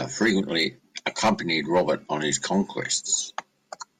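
Nothing goes wrong at any point in this bit of speech, so there's no technical fault here to point to.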